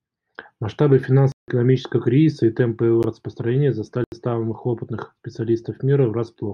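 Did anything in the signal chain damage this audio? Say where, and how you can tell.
Yes. Blocks of digital silence cut the speech at 1.32–1.48 s (160 ms), 3.03 s (12 ms, a tick) and 4.04–4.12 s (80 ms). This points to the driver or buffer stage: unfilled output buffers went out as zeros.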